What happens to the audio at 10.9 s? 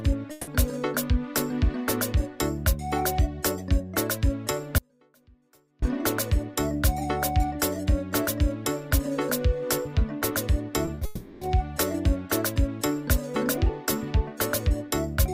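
Short concealed packet loss occurs at 10.85–10.89, 10.95–10.99 and 10.99–11.03 s. The receiver patched each 20 ms gap by extending the previous sound, causing brief smears. These show as repeated, smoothed waveform and spectrogram patches.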